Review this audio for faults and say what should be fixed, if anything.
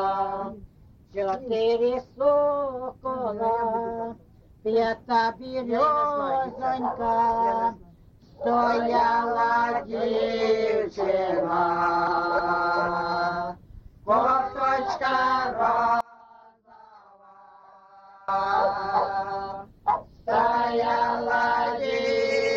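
From 16.01 to 18.28 s the sound suddenly collapses to a faint remnant, about 28 dB quieter than the surrounding audio, with its centre almost gone, then returns at full level. The likely cause is one channel inverted: with one stereo channel's polarity reversed, everything shared by left and right cancels when summed to mono, leaving only their small difference. Checking polarity and mono compatibility on every segment before export would prevent this.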